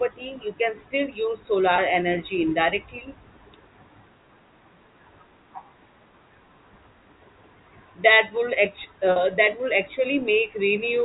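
Packet loss with pitch repetition at 1.76 s and 9.12 s replays the last pitch period across 20 and 40 ms gaps. The result is a brief buzzy hold, not silence.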